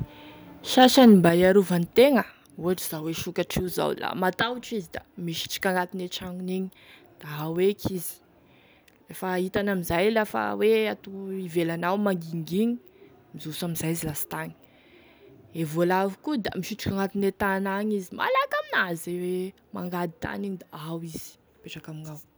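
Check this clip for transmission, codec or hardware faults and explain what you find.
Two faults appear in this speech clip: a burst of microphone overload near the start, followed by two sudden downward steps in microphone volume.

Microphone overload, 0.79 to 1.27 s. The loudest peaks here run about 3 dB past full scale and have their tops flattened, with a few percent of samples squared off. That gives the syllables a harsh, crackly edge. The likely cause is a microphone input gain set too high, so the peaks ran into the converter's ceiling.

Microphone volume stepped down, at 1.29 s and again at 2.31 s. Right after the distorted stretch, the whole signal, voice and background together, drops abruptly by about 6 dB. About a second later it drops again by about 5 dB. Each change is instant rather than a fade. This points to the call software likely reacting to the clipping by cutting the device's input volume in discrete steps.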